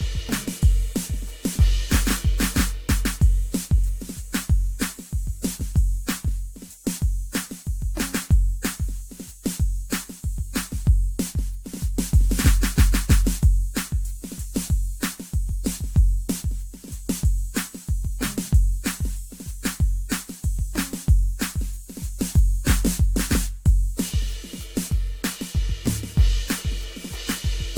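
Generation loss throughout the music: each re-encode requantises, leaving swirly, hollow smearing and blurred attacks, likely from about four AAC passes; nothing above 19.3 kHz.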